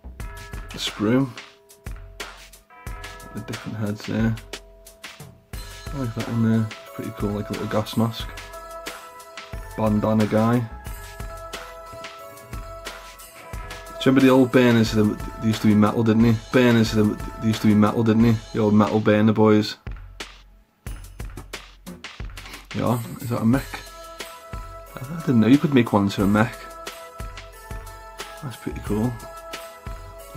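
A stream segment is repeated at 16.51 s: two seconds of the audio play again after a small blip, a duplicated segment rather than a dropout, since nothing is lost.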